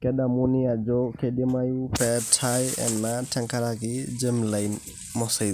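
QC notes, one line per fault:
No technical faults are audible at any point in the recording, and the signal path holds steady throughout.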